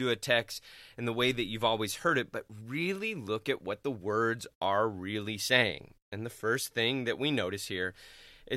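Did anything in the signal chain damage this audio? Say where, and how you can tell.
No. Nothing in the signal chain damaged this speech audio.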